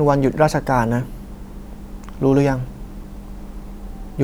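No technical faults can be heard in this recording.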